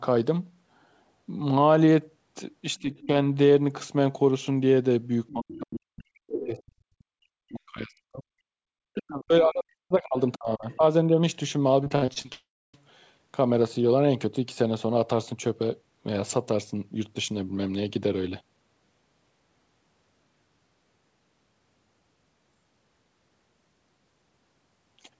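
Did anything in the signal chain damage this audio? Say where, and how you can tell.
Yes. Two stages show damage: call processing at the echo canceller, then the network.

The first fault is speech suppressed in double talk, at the call-processing stage. The talker's speech dips at 2.81 to 3.11 s by about 20 dB. It dips again at 5.33 to 8.24 s and 8.94 to 11.18 s, by up to about 40 dB. The likely cause is that both sides spoke at once. The echo canceller could not separate near speech from loudspeaker echo, so it attenuated both.

The second fault is the other side's voice leaking through, from the same stage. Faint scraps of a second voice sit under the talker at 2.98 to 3.07 s, 5.28 to 5.57 s, 6.29 to 6.59 s and 10.73 to 10.77 s. They run about 15 to 35 dB below the speech. They are short. The canceller's model of the loudspeaker path likely left residual echo in the microphone signal.

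The third fault is background gated by the echo canceller. At 8.52 to 8.66 s the room sound drops out by about 40 dB, for roughly 150 ms, then returns. The canceller clamped the microphone hard while the loudspeaker played, then released it.

The fourth fault is repeated packet loss (robotic sound), at the network stage. From 11.84 to 12.26 s the audio turns choppy. There are six separate holes, the longest about 62 ms. Close to 40% of that span is concealment, not real signal. The receiver patched each lost packet by extending the previous sound, and the next loss followed before the sound could recover.

Right after this comes a long network dropout, from 12.32 to 12.75 s. About 0.42 s of audio is missing. The last sound first stretches into a fading buzz or hiss. Roughly the final 0.28 s is silence. The audio then resumes further on, with nothing recovered. This pattern points to a likely burst outage on the network. 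The jitter buffer ran dry, and concealment faded out while nothing arrived.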